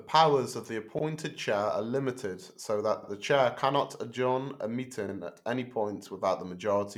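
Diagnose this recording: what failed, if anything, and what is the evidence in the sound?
Overlapping chunks at the buffer stage. The speech stutters at 0.99 s after "of the", at 3.04 s before "the chair cannot adjourn", and at 5.09 s before "at any point". Each 2 s block starts before the previous one ends, so 50 ms plays twice at every join.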